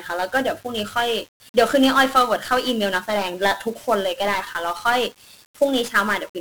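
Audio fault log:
Throughout: 1-bit DFPWM compression. The speech was encoded at one bit per sample, which fits a 48 kbps stream, each bit only nudging an adaptive level up or down. Heavy broadband quantisation noise results, so every syllable sounds fuzzy and crackly, with treble buried under hiss.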